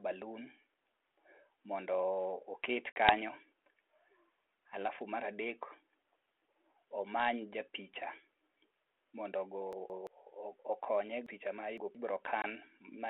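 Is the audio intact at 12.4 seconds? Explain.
No, there's a short dropout from 12.42 to 12.45 s: packet loss on an ADPCM call, about 20 ms gone, roughly one packet, filled with hard-edged silence. The decoder's adaptive predictor and step size lose sync with the sender's, so the speech comes back with brief distortion before settling.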